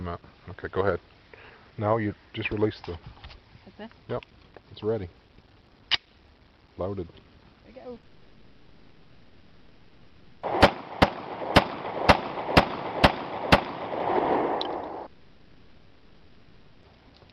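Just before 8 s the audio smears and wobbles in quick succession, at 7.95 s, 7.97 s and from 8.00 to 8.04 s. This is short concealed packet loss: 10 to 30 ms gaps were bridged by extending the preceding sound and then blending back into real audio. Right after, from 8.05 to 10.49 s and again from 15.06 to 16.84 s, the real audio gives way to a synthetic, fading buzz or hiss rather than clean silence, and it resumes later with that stretch missing. These are likely long network dropouts, with about 2.4 s and 1.8 s of audio never arriving and the receiver papering over each gap.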